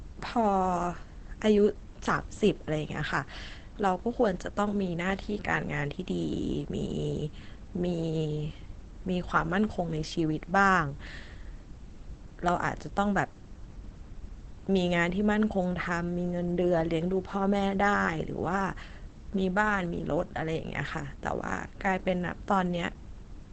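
Opus compression throughout: likely a low-rate Opus speech-mode encode near 16 kbps, leaving muffled, hoarse speech with nothing above about 8.8 kHz.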